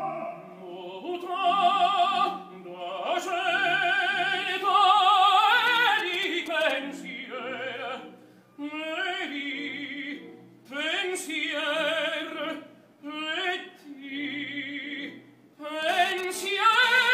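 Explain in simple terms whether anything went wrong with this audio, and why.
From 5.67 to 6.72 s there are GSM signalling bursts: a galloping dit-dit-dit of short buzzes. A nearby 2G phone was sending short radio bursts that the audio circuit picked up. They come in clusters, not as a continuous tone.

From 15.83 to 17.09 s a GSM phone buzz appears: a hard, raspy buzz repeating about 217 times a second, unrelated to the recorded sound. Here the phone was transferring data, so the buzz comes and goes. Its harsh texture and 217 Hz rate set it apart from smooth mains hum.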